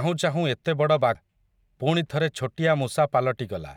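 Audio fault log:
1.15 s, damaged data in a compressed stream: corrupted bytes at this point leave the decoder unable to read the frame, so it loses sync and hunts for the next valid frame header, producing a brief garbled blip that cuts across the speech.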